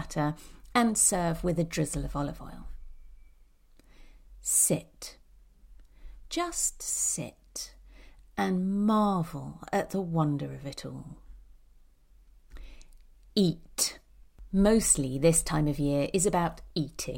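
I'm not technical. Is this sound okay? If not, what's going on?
Yes, nothing wrong can be heard in this recording.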